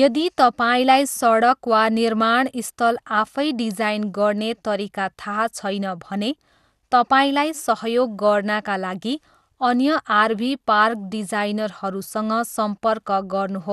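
Speech here sounds dull and gurgly throughout, with nothing above 12.1 kHz, likely from MP2 compression starving and switching off upper sub-bands at around 80 kbps.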